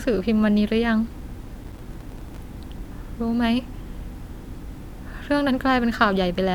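A speech clip with a burst of processor overload crackle from 1.64 to 2.4 s. The processor falls behind and misses its buffer deadlines again and again, and each missed buffer comes out as a tiny hard-edged gap of silence. The gaps are each only a few milliseconds long, which fits buffers of around 5 ms, and a few dozen of them run together into a gritty tearing over the speech. A single dropout would be one clean hole. Clipping distortion would follow the loud peaks. This crackle is a dense run of gaps that stops as soon as the load eases.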